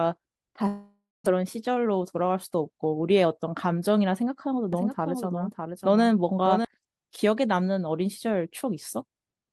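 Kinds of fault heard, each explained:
Long network dropout: from 0.67 to 1.28 s the sound breaks off, most likely because packets stopped arriving. The receiver stretches the last sound into a fading buzz for roughly 0.59 s, and for about 0.22 s of that only silence remains. When audio resumes, about 0.4 s of the original has been skipped, and the playback timing has shifted by something like 150 ms as the buffer refills.
Jitter buffer speed-up: from 1.36 to 3.26 s the speech runs about 9% fast while keeping its pitch, so it sounds hurried. After the dropout the receiver was holding more audio than it wanted. It caught up by cutting many tiny pieces, each one or a few pitch periods long, out of the signal, in total roughly 0.2 s of speech, rather than by raising the pitch.
Doubled audio track: from 4.73 to 6.65 s a second copy of the speech plays underneath the first, roughly 0.7 s behind and around 5 dB quieter. 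It is full-band with no reverb tail or room colour, so it comes across as a flat echo. The copy starts and stops abruptly, which most likely points to a second capture path or an edit that left two misaligned layers. Across the whole clip the Opus call codec limits the top end to 12 kHz.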